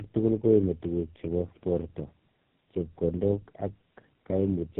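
Tandem speech coding runs throughout the clip. The speech was decoded and re-encoded by about three low-rate speech codecs in a row, which fits a GSM full rate, G.729A, GSM full rate chain, each coding the last one's errors. Nothing reaches above 3.8 kHz, and the speech sounds rough, muffled and warbly.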